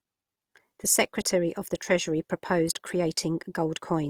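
Throughout, the speech sounds rough and grainy, its tones turned noisy though highs reach 20.4 kHz: likely Opus compression at a rate fitting 24 kbps.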